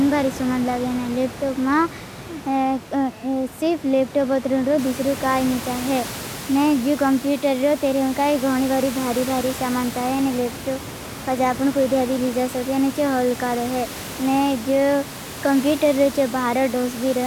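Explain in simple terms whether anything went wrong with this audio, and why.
Nothing went wrong in how the speech was captured or passed along; the background noise of the room, which gets noticeably louder from around 5 seconds in, belongs to the place where it was recorded rather than to any fault in the equipment.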